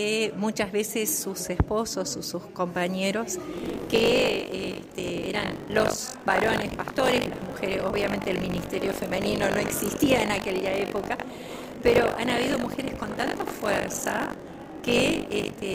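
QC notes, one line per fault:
3.52 s to the end, buffer tearing: the write and read positions in the ring buffer have slipped and cross inside every 20 ms period, so about a fifth of each period replays audio from roughly 70 ms earlier, with hard joins that produce a steady 50 Hz robotic buzz riding on the sound.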